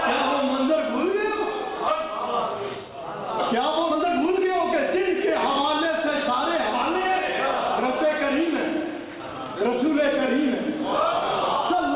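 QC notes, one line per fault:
1.88–1.9 s, skip ahead: about a second of waiting audio was dropped, so playback leaps forward with no gap and the two sides join almost directly.
3.84–4.56 s, jitter buffer speed-up: an overfull buffer repeatedly cut short pitch-period pieces, so the audio runs at 131% speed with unchanged pitch and sounds hurried.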